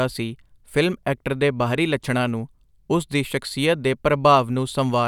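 No technical faults occur at any point in the speech, so there is nothing to describe in time order.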